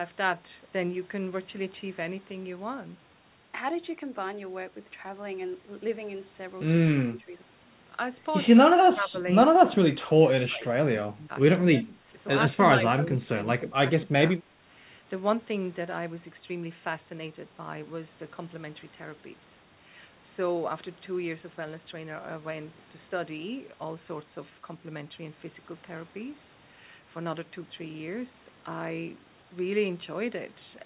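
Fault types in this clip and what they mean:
Speech suppressed in double talk (6.98 to 14.56 s): eight dips of about 15 to 25 dB, likely an echo canceller turning down overlapping talk.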